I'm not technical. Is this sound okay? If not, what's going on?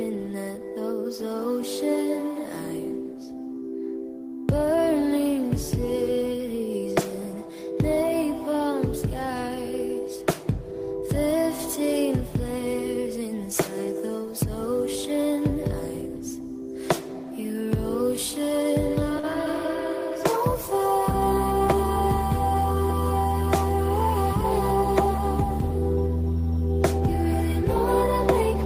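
No, there's one small glitch. Between 19.19 and 19.25 s there is a short stall from a late packet. A piece of the audio arrived late, so the player held the last bit of sound for about 40 ms while it waited, which gives a brief stretched or buzzy moment. Unlike a dropout, nothing is lost. The audio picks up exactly where it paused, just 40 ms later than before.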